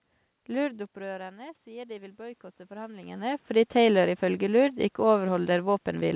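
From 0.56 to 3.38 s there's automatic gain rising. The talker moves back and drops about 16 dB, so the gain creeps up about 8 dB, swelling voice and room noise together.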